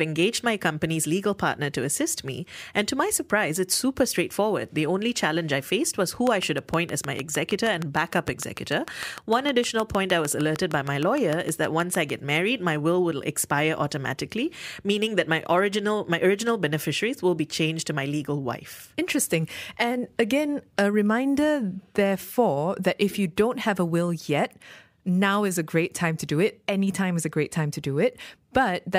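From 6.27 s to 12.11 s there's a train of clicks laid over the speech: about forty near-identical ticks arriving at a steady 6.5 per second, popping out around 15 dB above the speech and carrying straight through the pauses. That even, machine-like spacing points away from anything in the recording itself. It's likely interference from nearby equipment or a faulty connection or power supply injecting a pulse on a fixed cycle.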